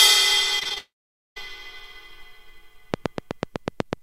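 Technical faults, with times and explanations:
0.59 to 0.78 s, repeated packet loss (robotic sound): four short gaps, the longest 20 ms, each patched by stretching the last bit of sound, so about a third of this span is filled-in material. That's why it turns choppy before the bigger hole.
0.78 to 1.38 s, long network dropout: the sound goes briefly buzzy as the last fragment is carried on, then falls away to silence for roughly half a second. Most likely nothing arrived here at all, so when it resumes that stretch is simply missing.
2.94 to 4.02 s, train of clicks: sharp ticks at a steady 8 per second, sitting about 10 dB above the sound and running right to the end, audible in the gaps too. Their even, identical shape points to likely interference from nearby equipment or a faulty connection.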